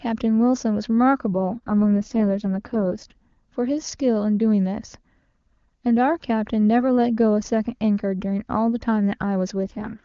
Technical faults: AMR rate drop

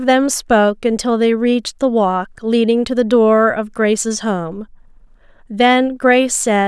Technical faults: none

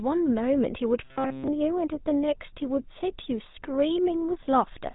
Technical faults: GSM full-rate codec; robotic sound from repeated short buffers

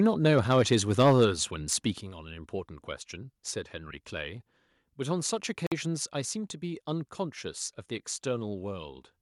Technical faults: microphone overload; microphone volume stepped down; Bluetooth stall

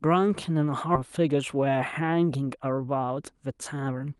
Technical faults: skip ahead; jitter buffer speed-up

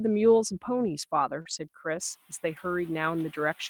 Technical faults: short concealed packet loss; lost packet rebuilt from error correction; noise suppressor catching up

